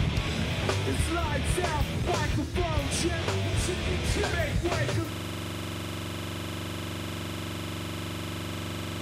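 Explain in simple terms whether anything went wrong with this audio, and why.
At 5.13 s a system hang loop begins: one 43 ms slice repeats until the end, making a steady buzz about 23 times a second rather than a single skip.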